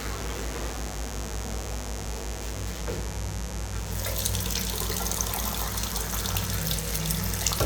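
Mains buzz runs from start to finish, locked to a 50 Hz supply. Sharp switching spikes, most likely from a dimmer, a rectifier or an unshielded cable, enter the signal path twice per mains cycle, so the interference repeats at 100 Hz and carries a dense stack of 50 Hz harmonics reaching into the kilohertz range. It sits only around 10 dB below the wanted sound and is heard as a constant, raspy, edgy buzz.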